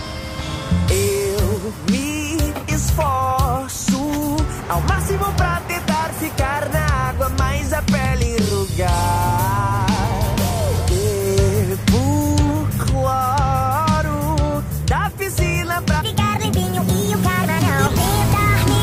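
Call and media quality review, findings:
No faults found: no dropouts, glitches or level anomalies anywhere on the reviewed path.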